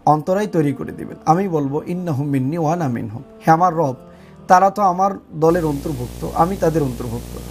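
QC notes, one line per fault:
5.49–7.51 s, video or display buzz: from 5.49 s to the end, a screen or video cable leaks into the audio, giving a buzz at the 60 Hz field rate with gritty hash riding above it, sitting roughly 15 dB under the signal.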